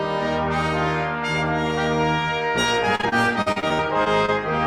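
From 2.95 to 4.30 s, repeated packet loss: about ten holes, none over 47 ms, each filled by extending prior sound, giving choppy playback.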